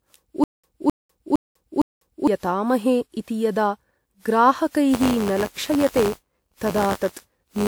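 Throughout the speech, the audio was likely decoded and re-encoded several times, with a character that points to WMA 1 at around 96 kbit/s. This is generation loss. Each pass requantises on a shifted frame grid, so the errors accumulate, and the voice sounds swirly, hollow and smeared, with softened attacks. Nothing remains above 20.1 kHz.

From 0.44 s to 2.28 s, playback likely stalled and retried, producing a stutter with silent gaps. A 262 ms fragment repeats four times, each followed by 197 ms of digital silence, giving a steady 459 ms cycle. The audio due during those gaps is lost.

From 4.93 s to the end, the writer and reader of the ring buffer have drifted so that they cross inside each period, causing buffer tearing. The 93.8 Hz rate fits a 512-sample buffer. In each period, a small slice of audio from about 20 ms earlier is spliced in with hard joins, producing a robotic buzz that sits on the speech.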